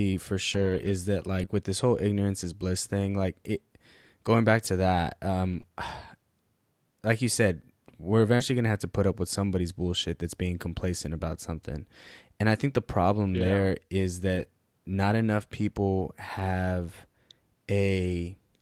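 Lost packets rebuilt from error correction first appear from 0.53 to 0.91 s. Each missing stretch was replaced by a low-bitrate copy carried in the following packet, so there is no gap. Instead the speech turns rough and noisier. The same rebuilding happens briefly at 1.41 to 1.43 s.

Short concealed packet loss follows at 1.45 to 1.49 s. About 20 ms of audio arrived too late, and the receiver filled the hole by extending the preceding sound before blending back, leaving a brief smear or wobble.

Right after "going back to that", error-correction rebuilding runs from 5.53 to 5.59 s, immediately followed by concealment at 5.61 to 5.65 s.

Between "like you said we're" and "going to", concealment covers 8.35 to 8.41 s, with its last 20 ms rebuilt from error correction.

Further error-correction rebuilds roughen 14.35 to 14.45 s and 16.39 to 16.41 s.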